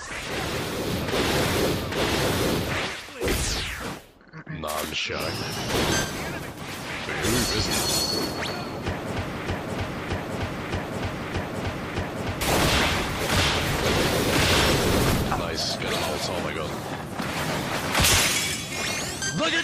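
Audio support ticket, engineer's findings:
Broken-record loop, 9.46–12.41 s: player or stream likely stalled, resending its last buffered fragment. A 0.62 s slice repeats five times back to back; the intended audio is lost.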